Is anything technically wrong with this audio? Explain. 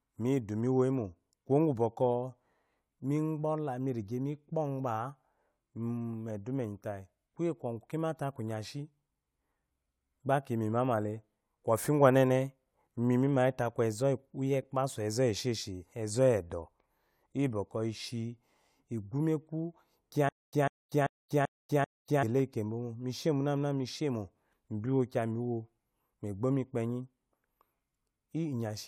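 Yes. From 20.29 to 22.23 s there is a stutter with silent gaps: a 147 ms fragment repeats five times, each followed by about 241 ms of dead silence, every 388 ms. This is likely a stalled stream replaying its last buffer. The fixed rhythm and the silent gaps set it apart from random dropouts.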